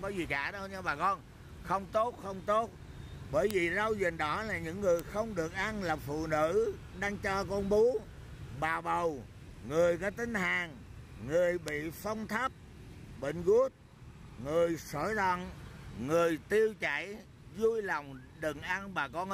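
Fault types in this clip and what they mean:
Bit error spike: a single bit flipped in memory or on a digital link throws one sample, or a few in a row, off by a power of two before the signal snaps back, so each event is a lone sharp tick with energy across the whole spectrum and no relation to the surrounding sound. Three occur, at 3.51 s, 4.99 s and 11.68 s, peaking at about -8 dBFS, -14 dBFS and -14 dBFS; the last spans three consecutive samples rather than one.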